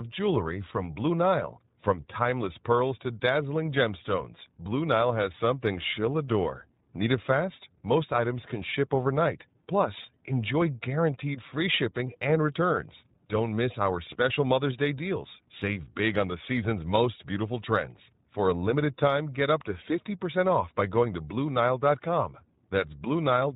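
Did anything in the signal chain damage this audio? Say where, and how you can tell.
Yes, at the codec stage: the whole speech clip has gone through iLBC. Nothing gets above 4 kHz, and there's a plainly audible rough, synthetic edge because each frame's excitation is coded on its own. That fits the 20 ms frame mode at around 15.2 kbps.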